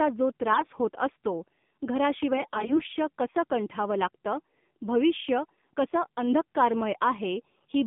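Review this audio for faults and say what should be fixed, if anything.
The speech sounds buzzy, thin and synthetic throughout, confined to roughly 150 Hz to 3.6 kHz. This is the AMR narrowband mobile codec at 7.4 kbps: 8 kHz sampling drops everything above 4 kHz, and the low bitrate leaves too few excitation pulses per 20 ms frame. To prevent it, capture or route the call over a wideband path rather than narrowband AMR.

The voice turns hoarse and gargly from 0.53 to 0.67 s, just before "होत असतो", and much more harshly from 2.36 to 2.81 s, just before "कसं कंठावं लागतं भविष्य". These are AMR bit errors on a weak link. The unprotected bits were corrupted at around 5% and then 15%, so pulses and fine gain and spectral values were decoded wrongly while pitch and level held. To prevent them, improve signal strength or use stronger error protection.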